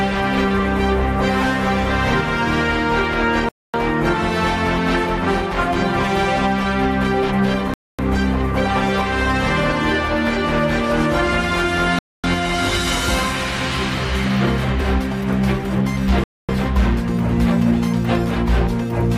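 The audio is interrupted by a gap between chunks four times. Each hole lasts 250 ms. They fall at 3.49, 7.74, 11.99 and 16.24 s. The spacing is regular, about every 4.25 s. That fits 4-second chunks, each followed by a quarter second of silence. Nothing seems lost at the joins. The sound simply stops and resumes, as if padding or a late start were inserted at each chunk boundary.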